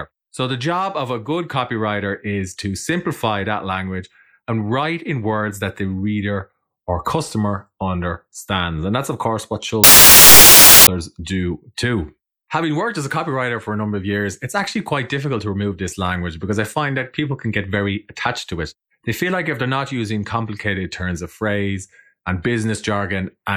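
From 9.84 to 10.87 s the reader assembles each sample's bytes incorrectly, whether shifted by one byte, in swapped order or on the wrong alignment, so these are samples built from the wrong bytes. The rapidly fluctuating low-order bits end up as the most significant part of every value. For just over a second the speech is replaced by loud, harsh broadband noise, close to white where the underlying audio is loud.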